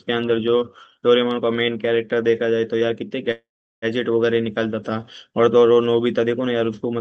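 Call audio freeze, 3.31 to 3.85 s: the sound trails into silence, likely as delayed packets emptied the jitter buffer, then resumes with nothing lost.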